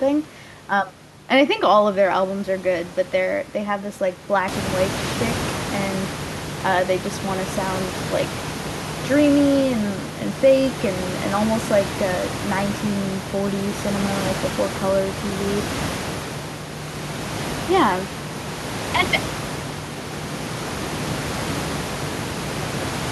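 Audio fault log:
No fault is logged for this speech clip.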